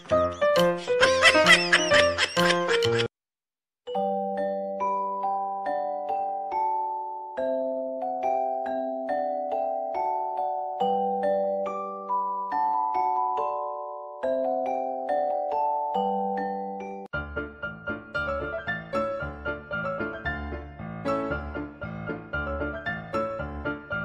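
No technical faults can be heard anywhere in the audio.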